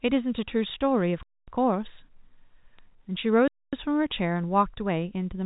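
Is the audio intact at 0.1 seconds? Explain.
Yes, the audio is intact at 0.1 seconds, with no fault at that moment.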